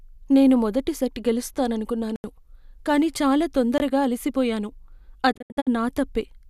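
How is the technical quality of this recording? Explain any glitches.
The recording has three audible gaps. Two are hard cuts to silence and one is a cluster of faded holes near the end.

Blocks of digital silence at 2.16–2.24 s (80 ms) and 3.78–3.80 s, just after "కానీ చాలా". Samples were zeroed, likely because a buffer wasn't filled in time. The cuts have no fade.

Digital broadcast dropout from 5.31 to 5.69 s. Corrupted frames mute the receiver. Unlike the block silences, these holes fade in about 20 ms and scatter over 336 ms, totalling 216 ms, with the longest lasting 72 ms.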